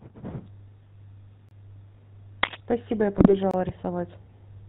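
The speech carries GSM full-rate codec coloration throughout. The codec rebuilds the voice from a vocal-tract filter driven by sparse pulses, and nothing above 4 kHz survives. The result is a plainly audible buzzy, gravelly roughness and a dull top end, consistent with a 13 kbps GSM full-rate stream.

At 1.49 s there is a gap between chunks: a 25 ms hole of silence with hard edges. It is left where two 2.0 s blocks of audio were joined. No sound is lost, but the flow is cut abruptly at the join.

From 2.41 to 2.57 s a burst of cable scratch noise rides over the speech, somewhat louder than it. It is dense, uneven and rustling. The likely cause is a worn cable or connector being moved, so its contact resistance jumps rapidly and injects noise.

From 3.15 to 3.35 s GSM bit errors break the voice into squawks and gargling pops. Flipped bits reached the decoder and corrupted the filter, pitch or gain values. 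That bends the spectrum and spikes the level across what points to several consecutive frames.

At 3.51 s the same 25 ms chunk gap recurs, about 2.0 s after the first. It is another hard-edged hole at the next block boundary.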